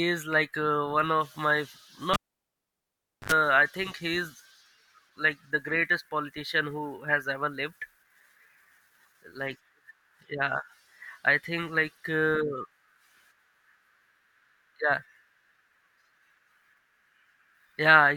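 At 2.14 s, after "of my", a pop marks a cable pulled and plugged in. Near silence follows for 1.13 s. A 73 ms burst of 50 Hz mains buzz sounds as the tip touches. A second pop at 3.32 s restores sound before "I think he is".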